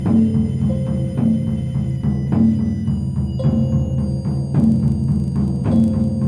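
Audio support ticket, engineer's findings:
Resampler restarted on every block, from 4.56 s to the end of the music. Regular ticking at 25 Hz, only while signal's present. Sample-rate converter, 48 kHz to 24 kHz, run on each 40 ms block separately with no carried-over history. Filter sees silence or wrapped samples at each edge, leaving a small glitch per block boundary.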